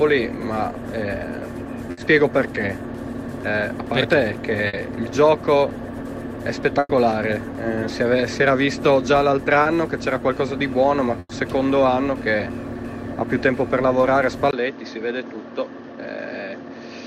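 Bursts of packet loss occur at 1.91 to 1.99 s and 4.67 to 4.75 s, each concealing 60 ms, then at 6.79 to 6.91 s and 11.19 to 11.31 s, each concealing 100 ms. The receiver extends the last sound as a fading buzz or hiss, with brief silences of 20 and 30 ms in the longer two, and resumes with the lost audio skipped.

Short concealed packet loss at 9.63, 12.37 and 14.01 s patches about 20 ms each, heard as a quick smear or wobble.

From 14.51 s to the end, the input has likely switched to a poorer device. After a 20 ms silence, the sound turns duller, with nothing above 6.6 kHz, about 5 dB quieter, and new background noise roughly 35 dB down.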